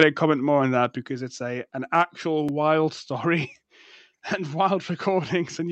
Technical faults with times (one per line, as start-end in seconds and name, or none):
0.00-0.03 microphone overload
0.03 microphone volume stepped down
1.02 microphone volume stepped down
2.49 block of digital silence